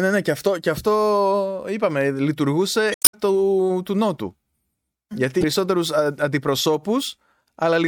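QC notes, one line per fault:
2.92–3.15 s and 5.40–5.44 s, damaged data in a compressed stream: corrupted frames are misread, so the decoder loses sync and skips ahead to the next frame header, heard as a brief glitch and visible as abrupt waveform discontinuities.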